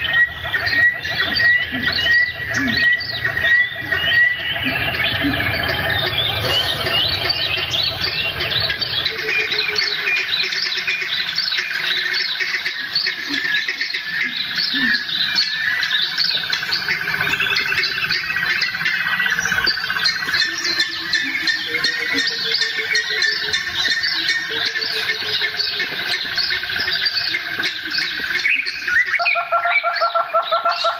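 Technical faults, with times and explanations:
Throughout, gain pumping: the gain swings by roughly 15 dB, so loud and soft parts sit unnaturally close in level and everything feels squashed. The likely cause is gain set far too high feeding a fast limiter or compressor. Unlike a noise gate, the floor never drops to silence.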